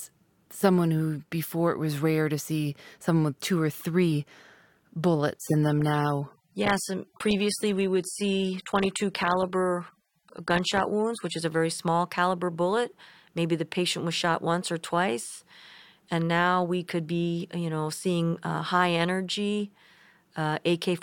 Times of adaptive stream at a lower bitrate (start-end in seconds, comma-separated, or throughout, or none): 5.39-11.39